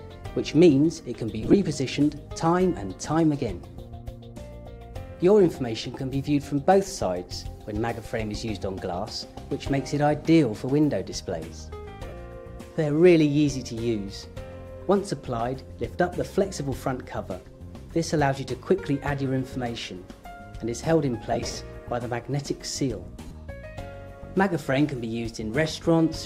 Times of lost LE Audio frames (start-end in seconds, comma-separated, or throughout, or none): 1.42-1.54, 12.08-12.12, 21.32-21.58, 23.26-23.33